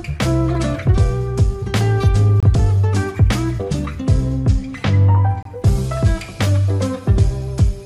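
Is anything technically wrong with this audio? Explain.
Yes. There is a gap between chunks: the audio was delivered in pieces about 3 s long. This leaves about 25 ms of silence at 2.40–2.43 s and 5.43–5.45 s. These are short holes, but no sound is lost.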